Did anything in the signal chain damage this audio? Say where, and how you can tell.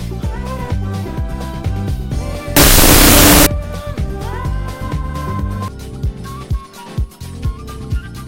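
Yes. From 2.57 to 3.46 s the sound collapses into loud noise with the original faintly buried inside, dragged to half speed and an octave low. That is a wrong sample width at the sample-format conversion stage: 16-bit integer data read as unsigned 8-bit.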